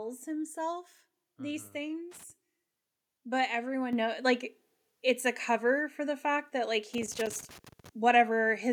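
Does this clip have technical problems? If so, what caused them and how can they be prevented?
Yes. A worn or dirty connector making and breaking contact chopped the signal, causing loose connector crackle from 2.11 to 2.30 s and again after "the fact that like" from 6.94 to 7.89 s. Cleaning or replacing the plug and cable prevents it.

At 3.93 s, just before "know like it's a", software raised the microphone input in one step, so the microphone volume stepped up by about 7 dB, lifting voice and background together. Disabling automatic microphone gain adjustment prevents it.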